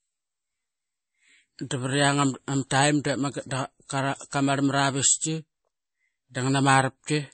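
Speech runs with plainly audible MP3 compression damage from start to finish: the treble stops dead at about 8.4 kHz, and s sounds turn watery and chirpy as weak frequency lines switch on and off between frames. On a spectrogram there is a flat ceiling at 8.4 kHz and flickering gaps below it, while the waveform shows attacks softened. That pattern fits a low-bitrate encode near 32 kbps, likely starving the encoder of bits.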